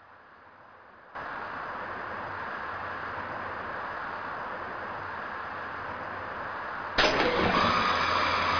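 Nothing stood out on listening to this audio.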